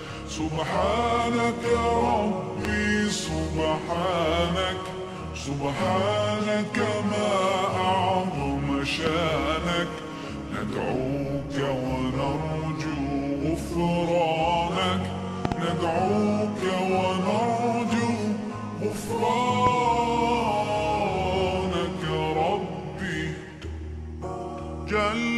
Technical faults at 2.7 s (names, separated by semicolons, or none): loud pop